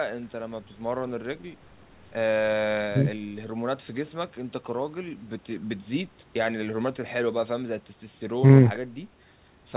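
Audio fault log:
Nothing stood out on listening to this speech recording.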